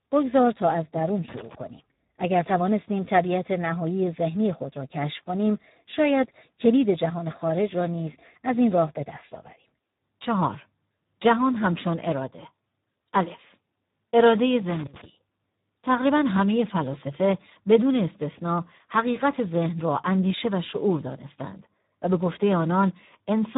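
From the first second the speech sounds hoarse and grainy, with a thin, boxy tone and nothing above about 3.8 kHz. This is heavy Speex codec damage. Speex models speech with a predictive filter and a coded excitation signal. At a low quality setting, which here fits roughly 8 kbps, too few bits reach the excitation, so its detail is replaced by rough noise and the narrow band cuts away the upper frequencies.

From 1.28 to 1.55 s, an irregular burst of scratchy crackle cuts across the sound, and a second burst comes from 14.69 to 15.04 s. Both are loose connector crackle. A worn or dirty contact rapidly makes and breaks the circuit, chopping the signal into fragments. Any DC on the line adds pops, and the chopping forms the ragged, scratching texture heard in those two stretches.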